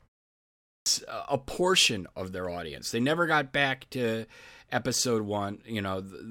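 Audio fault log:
0.74–0.86 s, clipped start after a pause: speech resumes after 0.74 s of silence, but its first 121 ms are swallowed, so the sound begins abruptly without its first sounds. The output path idled during the silence and had not fully woken and locked when audio returned. On the waveform, flat silence jumps straight into speech with no build; the spectrogram shows a hard vertical edge where energy should fade in.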